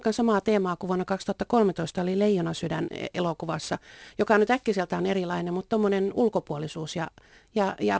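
Aliasing runs through the whole clip. It sounds like the speech was downsampled, which fits a drop from 44.1 kHz to 16 kHz, with no anti-alias filter before the conversion. Everything above 8 kHz folded back down into the band as unrelated frequencies. You can hear it most on the sibilants, which come out gritty and a bit metallic. The spectrum runs hard right up to 8 kHz, with the folded junk sitting roughly 25 dB below the signal.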